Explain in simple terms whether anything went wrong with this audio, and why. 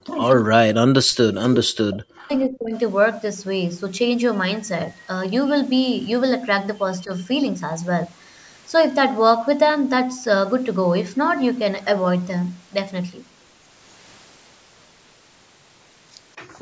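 The talker's voice sinks away or cuts out in pieces at 0.00–0.22, 0.43–1.11 and 1.83–2.74 s, and briefly dips at 7.05–7.10 s. This is likely speech suppressed in double talk: the other side spoke at the same time, and the echo canceller turned everything down.

Near the very end, from 16.43 to 16.56 s, the room sound briefly drops out and then returns. This is background gated by the echo canceller, which sharply muted the microphone while the loudspeaker played.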